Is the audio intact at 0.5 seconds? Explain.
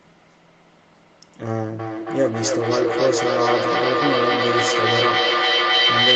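Yes, the audio is intact at 0.5 seconds, with no fault at that moment.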